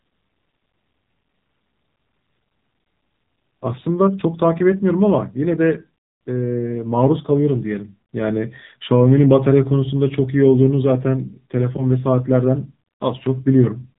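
From start to finish the speech has passed through the AMR narrowband mobile codec, the AMR-NB coder used on 2G and 3G phone calls, running at a low rate that fits about 7.4 kbps. The coder resamples to 8 kHz and rebuilds each 20 ms frame from a vocal-tract model fed by a handful of pulses, so nothing above 3.8 kHz survives. The result is muffled, boxy telephone speech with a plainly audible buzzy, synthetic edge.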